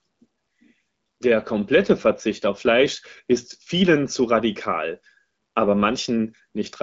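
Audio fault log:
No faults are heard in this clip. The audio stops at about 7.6 kHz, which fits the AMR wideband (HD Voice) codec running at a rate around 12.65 kbit/s.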